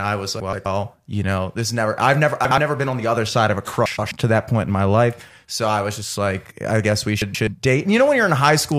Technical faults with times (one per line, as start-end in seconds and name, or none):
0.40-0.66 frames out of order
2.45-2.58 frames out of order
3.86-4.11 frames out of order
7.21-7.47 frames out of order